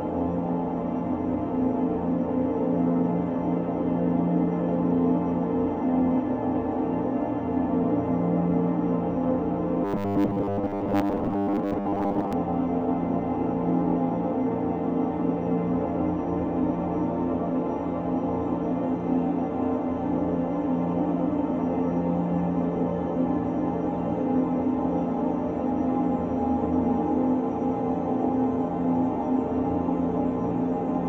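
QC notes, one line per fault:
9.85 to 12.33 s, robotic sound from repeated short buffers: for about two and a half seconds the sound turns into a hard, metallic buzz pitched at 100 Hz that only loosely tracks what's underneath. The likely cause is fresh audio arriving too slowly, so the playback keeps looping the last 10 ms chunk across most of this stretch while the real material gets skipped. Repeating a 10 ms slice is what stamps that fixed 100 Hz tone on it.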